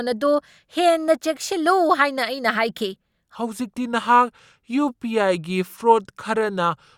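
From 3.35 s to the end, the speech has a section at the wrong speed: playback drops to 0.82 times the original rate, so pitch and tempo fall together at the switch point. The voice turns deeper by around three semitones and the delivery slows noticeably, with a clear step change rather than a gradual drift. The likely cause is that this part was rendered or played against the wrong clock, stretching it without pitch correction.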